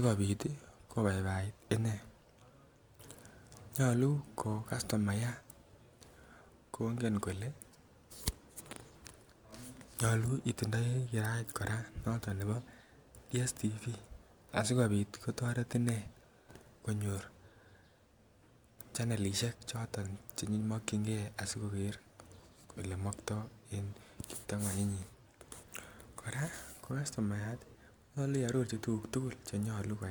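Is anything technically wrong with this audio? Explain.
No, no technical faults here.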